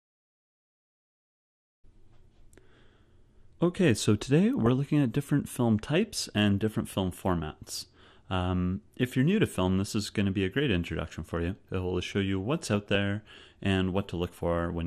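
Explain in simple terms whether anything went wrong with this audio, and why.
MP2 compression is clearly audible throughout the clip: the sound is dull, with a gurgling, grainy texture. The likely cause is that the encoder split the sound into 32 frequency bands without enough data to go round, so upper bands switched off and the remaining ones were stored only roughly.

DAB burbling occurs at 4.66 s and again from 12.62 to 12.95 s. Weak digital radio reception let corrupted data slip past error correction. The damaged pieces come out as short blips of noise within narrow frequency bands.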